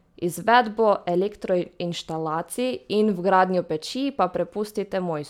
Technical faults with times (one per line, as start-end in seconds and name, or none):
none